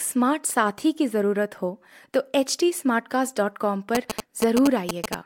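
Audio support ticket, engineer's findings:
GSM signalling bursts, 3.95–5.15 s: galloping ticks and 217 Hz buzz, roughly level with the speech. Nearby 2G handset signalling; its RF bursts are rectified in the audio circuit.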